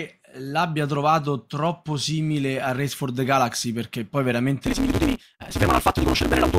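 From 4.66 s, just after "perché poi", to the end of the clip, there is a block size mismatch with truncation. One stage hands over longer blocks than the next one reads, so the tail of each block is discarded. A buzz at about 188 Hz appears, set by that block rate. The speech rushes ahead at roughly 1.88 times normal speed, yet its timbre stays. The sound points to a 256-sample read size.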